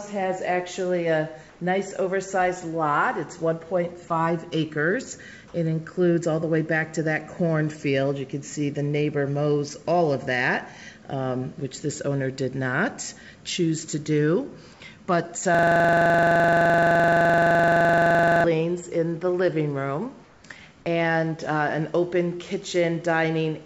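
The audio passes through a call codec whose top end stops at 8 kHz, which fits G.722. At 1.50 to 1.60 s and 20.24 to 20.44 s, comfort noise replaces the background. Steady, featureless hiss stands in for it, likely from discontinuous transmission. The second patch drops about 3 dB. From 15.55 to 18.44 s comes a system hang loop. One 42.67 ms slice repeats about 68 times, a stutter at 23.4 Hz. That fits a 2048-sample ring buffer cycling while the system froze.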